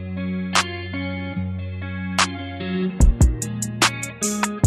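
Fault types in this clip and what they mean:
No faults detected in this clip.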